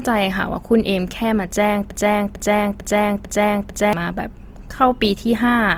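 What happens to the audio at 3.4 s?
At 3.4 s the audio is inside a broken-record loop running from 1.91 to 3.93 s. A fragment of about 0.45 s plays five times back to back, likely because the player or stream stalled and kept resending the last piece it held, so the speech that belonged in those two seconds is gone. On a waveform the same 0.45 s envelope repeats like a stamp. On a spectrogram identical blocks sit side by side, with hard seams at each restart.

The same moment also carries plainly audible Opus compression, likely from a 24 kbps encode in its music (CELT) mode. At that rate the encoder keeps each band's energy but fills starved bands by folding or noise, so the speech sounds grainy and rough rather than hollow. A spectrogram shows content running right up to about 20.2 kHz, but the upper bands look smeared and noise-textured instead of showing clean harmonic lines.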